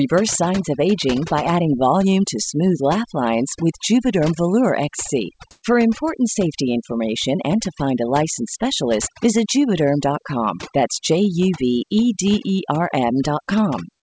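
A speech recording carries overdone noise removal throughout. Noise reduction set too aggressively has pulled the background down, sprinkled with twinkling specks. That fluttering, band-by-band loss is what separates it from the clean top-end limit of the call codec, which leaves nothing above 8 kHz. From 5.51 to 5.63 s, just before "important safety information and", the background is replaced for about 120 ms by steady, featureless noise whose level changes by about 24 dB. This is likely comfort noise in place of the background, inserted while discontinuous transmission paused the sender. Unlike a dropout, the gap is filled with smooth synthetic hiss rather than going silent.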